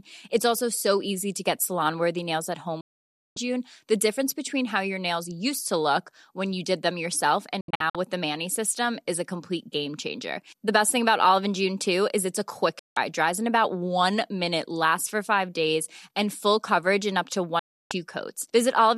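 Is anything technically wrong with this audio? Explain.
Yes, this speech has four digital broadcast dropouts, where the receiver stopped getting valid frames and muted until clean ones returned. The sound vanishes at 2.81–3.37 s after "worthy nails at home", at 12.79–12.97 s after "is it's a quick", and at 17.59–17.91 s. At 7.61–7.95 s, between "you did them yourself" and "with the", it breaks into several short holes, the longest 72 ms. Each mute fades in only 3 ms, so the waveform flatlines abruptly and the spectrogram shows blank full-band columns.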